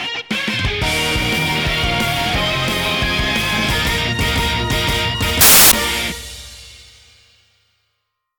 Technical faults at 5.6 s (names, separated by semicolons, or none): samples built from the wrong bytes